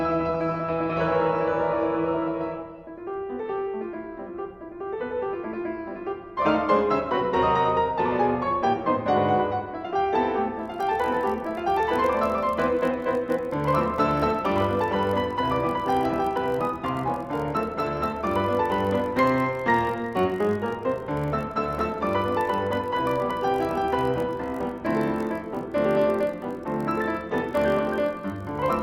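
From 10.53 s to the end, a block size mismatch (padded) sets in. One stage writes blocks slightly shorter than the next reads, and zeros fill the rest. The repeated gaps buzz at 46.9 Hz, which fits 1024-sample blocks. Playback slows only to 0.999 speed.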